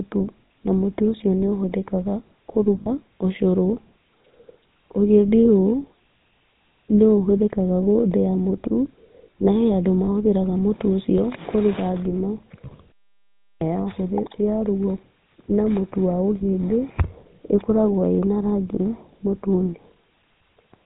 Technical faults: GSM full-rate codec; lost GSM frames

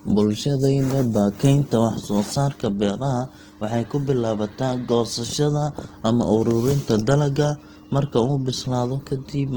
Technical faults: Opus compression

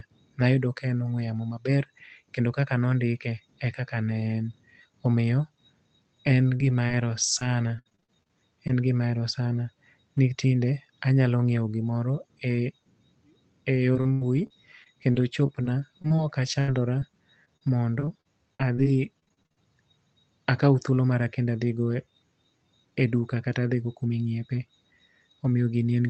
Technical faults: repeated packet loss (robotic sound)

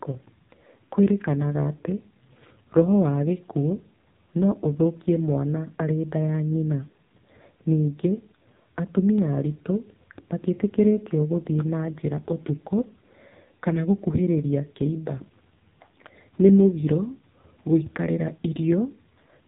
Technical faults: AMR narrowband mobile codec

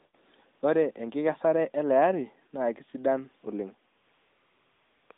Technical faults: AMR comfort noise

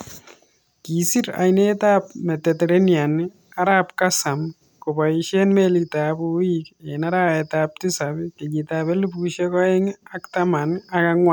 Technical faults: none

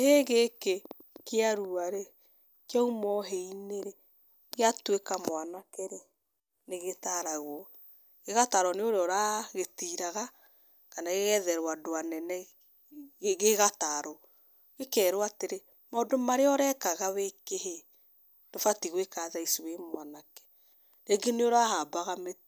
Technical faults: none

